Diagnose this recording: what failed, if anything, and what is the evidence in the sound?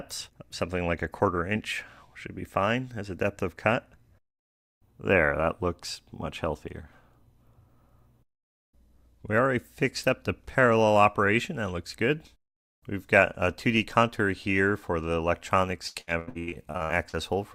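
Repeated packet loss (robotic sound) occurs from 15.87 to 17.15 s, a network fault. About a dozen short holes, the longest 80 ms, are each patched by extending the previous sound, so 43% of the stretch is concealed and the audio turns choppy and robotic.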